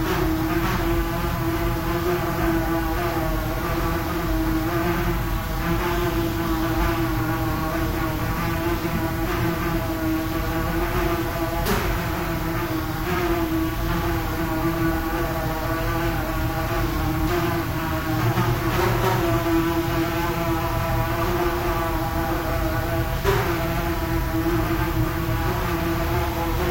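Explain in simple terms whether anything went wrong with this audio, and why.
Nothing went wrong: across the whole recording of sounds there is no technical fault to hear.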